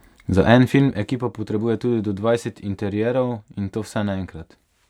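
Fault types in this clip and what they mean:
zipper noise: a roughly 10 dB drop arrives in unsmoothed steps, about a hundred a second, so a fine zipping rides the speech before "potrebuje tudi do dvajset".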